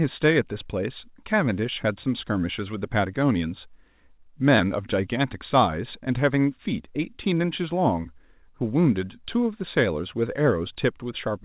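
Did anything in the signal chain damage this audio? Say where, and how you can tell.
No, nothing in the signal chain damaged this audio.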